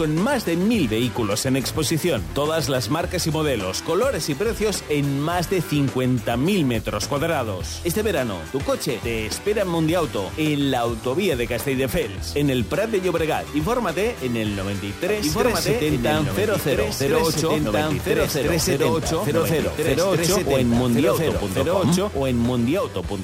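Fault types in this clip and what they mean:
Doubled audio track: From 15.08 s to the end, a second copy of the sound runs about a second and a half behind the first, at roughly the same level and with the full bandwidth intact. It has no reverb tail or room colour, and it cuts in abruptly rather than fading up. That's likely a second capture through a slower path, or an edit leaving two copies out of step, stacked together in the mix.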